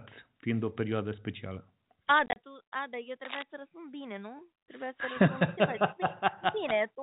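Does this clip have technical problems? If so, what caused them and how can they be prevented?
Yes. Packet loss filled with silence breaks the speech between 2.26 and 2.36 s: about 70 ms goes missing in several short holes spread over 100 ms, the longest 30 ms. The hard-edged silent gaps, rather than smeared or repeated sound, set it apart from concealment. Jitter buffering with loss concealment or forward error correction would prevent it.

Cable scratch noise covers 3.25 to 3.43 s, a dense, uneven rustle at about 5 dB below the speech. Its irregular, crackly texture, rather than steady hiss or low wind rumble, points to a worn cable, connector or control that was likely being moved. Replacing or securing the cabling would prevent it.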